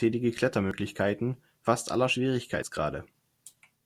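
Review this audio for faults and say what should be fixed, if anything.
The recorder likely loses a brief stretch each time it closes one roughly one-second chunk and opens the next, leaving audio missing between chunks. At 0.71, 1.67 and 2.63 s the speech skips ahead by about 40 ms, its edges joined with no gap. To prevent this, double-buffer or overlap the chunks so capture continues while each one is handed off.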